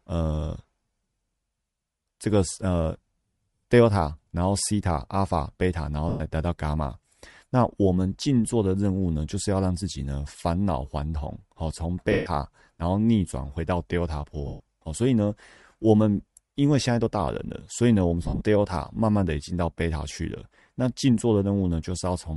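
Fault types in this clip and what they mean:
Bluetooth LC3 compression: A plainly audible breathy, grainy edge runs through the speech, likely from LC3 coding in 10 ms frames at a rate that fits 48 kbps. A spectrogram shows a patchy upper band where zeroed regions are filled with noise.
lost LE Audio frames: Losses at 6.09, 12.12, 14.47 and 18.23 s last 110, 140, 130 and 130 ms. The last is scattered over 180 ms, with runs up to about 50 ms. The decoder repeats the previous spectrum with random signs, showing as smeared noisy blocks.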